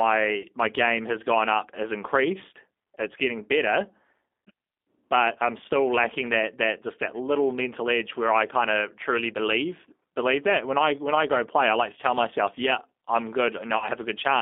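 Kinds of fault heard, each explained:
G.729 codec, throughout: the decoder rebuilds the sound from a vocal tract filter, a pitch predictor and a few pulses per frame, giving a plainly rough, synthetic tone confined to 250 Hz to 3.6 kHz, which fits an 8 kbit/s G.729A stream.
VoIP packet loss concealed by the speech codec, at 0.42–0.46 s before "my game has gone" and 13.78–13.89 s after "tell myself yeah I'm": 20 ms, then 40 ms, went missing (likely one and two packets). The decoder extended its last pitch and filter at falling gain, causing a brief, stretched, fading smear.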